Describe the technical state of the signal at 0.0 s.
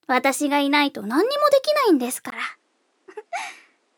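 The signal at 0.0 s is intact, with no audible fault at that moment.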